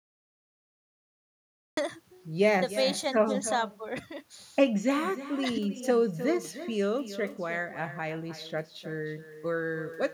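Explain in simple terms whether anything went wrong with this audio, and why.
Two things went wrong. First, there's a cut-off start: the clip is dead silent until 1.77 s, then the speech jumps in mid-sound with no natural lead-in. The recording simply began late, so the beginning of that sound was lost.

Second, there's echo with no canceller throughout. Every phrase comes back about a third of a second later as a quieter, thinner copy. The other end was playing the call through a speaker, their microphone picked it up, and nothing stripped it out.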